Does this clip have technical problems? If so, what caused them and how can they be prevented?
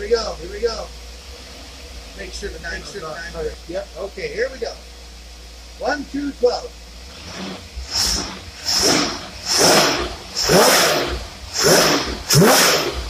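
Yes. A doubled audio track runs from the start to 3.54 s: one full-band copy, about 5 dB quieter, trails roughly half a second behind, then stops abruptly. Unlike an echo, it has no decay or room colour. It likely comes from a second, slower capture path or two misaligned copies in an edit. To prevent it, route the source through only one path and check edits for stacked duplicate regions.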